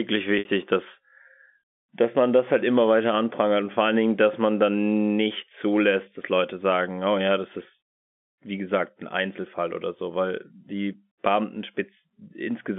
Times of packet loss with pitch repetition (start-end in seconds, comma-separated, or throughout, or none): 0.39-0.45